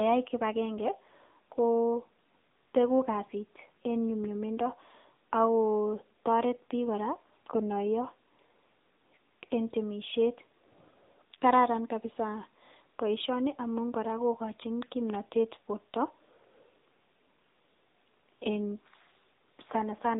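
Speech squeezed through the AMR narrowband mobile codec the whole way: nothing above about 3.8 kHz, with a buzzy, synthetic edge that points to a mode around 8 kbps.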